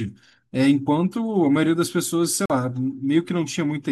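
From 2.46 to 2.52 s the speech cuts out, likely a Bluetooth dropout losing late packets; waveform and spectrogram show an empty gap.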